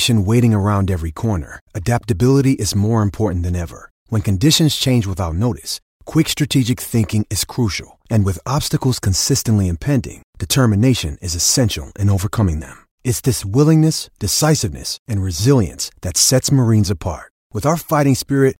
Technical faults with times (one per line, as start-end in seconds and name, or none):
none